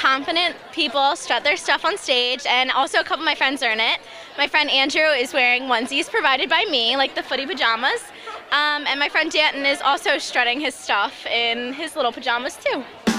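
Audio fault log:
No faults heard on audition; nothing to log.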